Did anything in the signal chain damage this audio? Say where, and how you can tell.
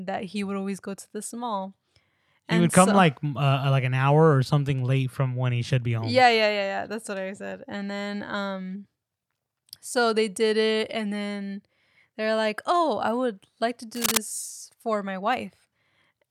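Yes. From 13.95 to 14.17 s, just after "would like to", a burst of dense, uneven scratching sits over the speech at about its own level. This is cable scratch noise in the analogue wiring, likely a worn cable or connector moving so its contact resistance fluctuated rapidly.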